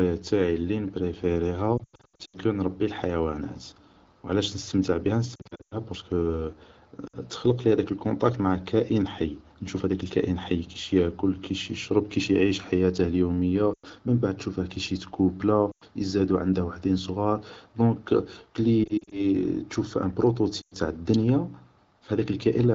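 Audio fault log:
1.78–2.37, 5.36–5.77, 7.07–7.17 s (just before "تخلقلي هداك الكونتاكت مع"), 13.74–13.87, 15.72–15.84, 18.83–19.21, 20.61–20.74 s: lost AMR speech frames. The wideband decoder, clear at a quality consistent with 12.65 kbit/s, replays the last good parameters at falling gain, so speech sinks toward near silence within two frames and returns weak or rough. The first two runs are scattered, with lost stretches up to 100 ms long.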